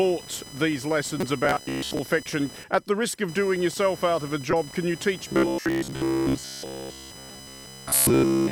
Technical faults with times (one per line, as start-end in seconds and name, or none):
0.00-8.52 computer activity noise
1.18-1.23 corrupt frame decoded
1.45-1.99 robotic sound from repeated short buffers
4.51-4.53 corrupt frame decoded
5.28-8.52 robotic sound from repeated short buffers